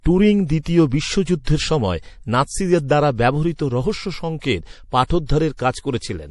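A speech recording with a hard treble ceiling at 11.4 kHz and plainly audible watery, swirling artefacts. These are likely MP3 compression, consistent with a low bitrate around 48 kbps. Pre-echo puts brief hiss ahead of sharp attacks at 0.63–0.66 s, 1.44–1.47 s (just before "সময় নাৎসিদের দ্বারা ব্যবহৃত"), 5.05–5.10 s, 5.26–5.29 s and 5.58 s. The codec's block noise spills up to 54 ms before each onset, softening it.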